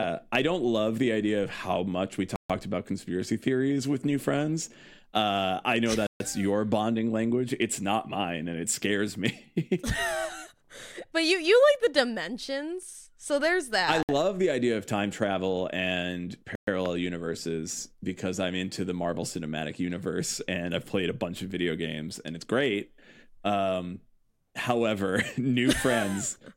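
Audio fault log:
2.36 to 2.50 s, 6.07 to 6.20 s, 14.03 to 14.09 s, 16.55 to 16.67 s: Bluetooth stall. The speech drops to silence four times, for 139, 135, 61 and 121 ms. The first falls after "of how much we" and resumes at "about conspiracy theories with". The second follows "I know". The third sits between "there's that I" and "the idea of time". Each gap is likely a wireless link stalling. Delayed packets leave the playback buffer empty, so output halts until data arrives again.
16.86 s: loud pop. A single sharp pop lands just after the last dropout, about 10 dB above the speech. It lasts around 20 ms, and the speech carries on beneath it. The likely cause is a sudden voltage pulse added to the signal. The circuitry after it shapes that pulse into a brief, hard click.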